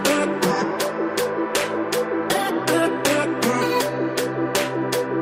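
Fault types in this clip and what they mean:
Nothing stood out on listening; no audible problem was found anywhere in the clip.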